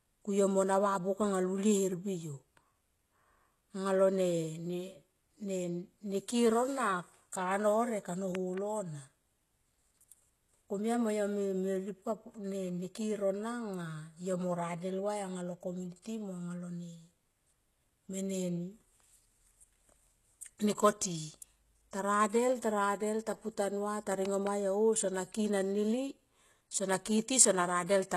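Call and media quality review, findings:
Low-bitrate audio saved at a high bitrate, whole clip: dull, smeared speech with a hard ceiling at 12.3 kHz. Likely an earlier very low-bitrate encode re-saved at a high rate. Spectrogram shows a flat empty band above 12.3 kHz throughout.

Loud pop, double pops at 8.35–8.60 s (about 10 dB above speech) and 24.26–24.49 s (about 15 dB above). Speech continues underneath. Likely a voltage step from a connector, switch or static. Waveform shows paired sharp spikes clearing the speech envelope.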